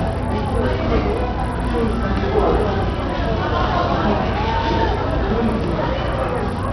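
From start to finish the sound has its treble dropping out and flickering, with gritty noise and aliasing over everything, heavy damage that likely comes from Bluetooth SBC compression at a starved bitrate, fitting roughly 64 kbps. A spectrogram shows blotchy, vanishing upper bands.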